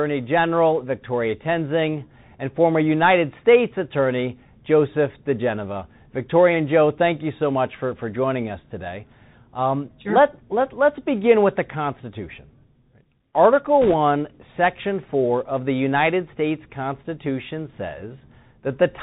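Bluetooth CVSD headset codec, throughout: the speech passes through a one-bit delta coder whose step size chases the waveform, and nothing above 4 kHz survives. The damage is plainly audible, with a granular hiss beneath the speech, scratchy s sounds and loud bright moments distorting where the step falls behind, consistent with a 64 kbps CVSD link.

Bit errors on a Bluetooth voice link, 13.82 to 13.94 s: flipped bits corrupt the one-bit stream at a rate of a few percent. Each bit carries little weight and errors fade quickly, so there are no sharp clicks, just a brief burst of rushing, crackly noise over the speech.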